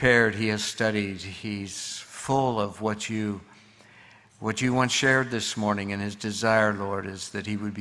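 No technical faults can be heard anywhere in this audio.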